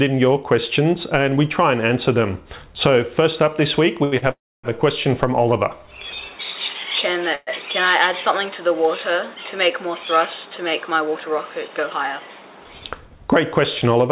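Short stall from a late packet at 4.04 to 4.15 s and again at 4.18 to 4.25 s: each time the next packet was not ready, the jitter buffer ran dry, and the receiver held the last sound for 77 ms and then 40 ms before continuing from the same point. Nothing is lost, but the sound is stretched with a brief buzz or dip, and each stall adds its length to the delay.

Call audio freeze at 4.31 to 4.67 s and at 7.35 to 7.50 s: the sound carries on as a fading buzz or hiss, and the first event settles into 270 ms of silence within 327 ms of filler. The second fills 120 ms, only 10 ms of it silent. Playback then resumes where it stopped, so gaps are inserted rather than audio removed. The likely cause is packets held up in transit, emptying the jitter buffer.

Jitter buffer speed-up at 11.68 to 12.89 s: with surplus audio queued, the receiver cut short slices of one or a few pitch periods in quick succession, about 150 ms in all. 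The audio therefore runs at 110% speed at unchanged pitch, which is enough to sound hurried.

Throughout, nothing reaches above 4 kHz, which fits the G.711 mu-law call path at 64 kbps.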